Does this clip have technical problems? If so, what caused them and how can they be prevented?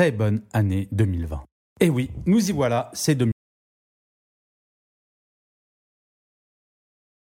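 Yes. At 3.32 s the speech cuts off mid-flow and never returns: from there to the end the track is dead silence, with no room tone or background hiss. This is an audio dropout to silence, most likely from the input being lost through a disconnected device, a failed link or an accidental mute, while the recorder kept writing silence, so everything after that point is gone. Securing cables and monitoring input levels live during recording prevents it.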